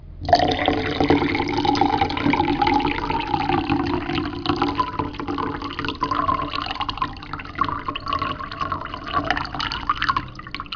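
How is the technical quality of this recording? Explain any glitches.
No audible glitches or dropouts.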